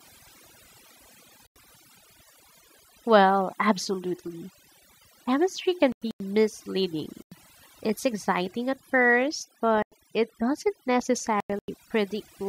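Overdone noise removal runs throughout: a noise reduction stage set far too hard keeps pulling individual frequency bands down whenever they sit near its noise estimate, so the pauses collapse into near silence dotted with twinkling specks.

At 1.40 to 1.65 s, a corrupt frame was muted: the decoder rejected damaged compressed frames and the player substituted silence, leaving an abrupt hole of about a quarter second with the timing preserved.

At 4.28 s, a corrupt FLAC frame decoded without a checksum check sends the predictor off on wrong values for a few milliseconds, producing a short error peaking at about −36 dBFS before the next frame plays cleanly.

Further muted corrupt frames cut the same kind of sudden silent gap at 5.92 to 6.20 s, 7.05 to 7.32 s, 9.75 to 9.92 s, and 11.40 to 11.68 s. Each lasts between roughly 0.17 and 0.28 s, which fits the loss of a few whole frames.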